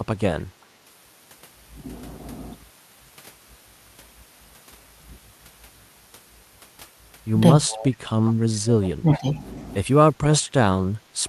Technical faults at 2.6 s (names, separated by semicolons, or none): none